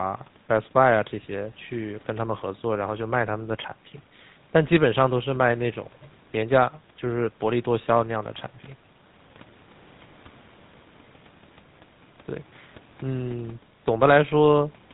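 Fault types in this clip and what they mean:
GSM full-rate codec: The speech runs through the original GSM coder for the whole clip. It models the vocal tract and excites it with evenly spaced pulses, keeping only every third excitation sample. Nothing above 4 kHz survives, so the sound is dull and band-limited. The damage is plainly audible as a buzzy, gravelly roughness on the voice. That texture fits the 13 kbps full-rate coder. Quiet room noise, about 34 dB below the speech, sits underneath.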